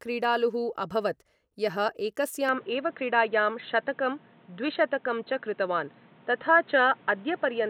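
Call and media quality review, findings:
Speech narrows at 2.49 s to the end, nothing above 4.1 kHz, no gap. Likely input switched to a poorer device: a new noise floor about 30 dB below the speech appears, unlike a codec bandwidth cut.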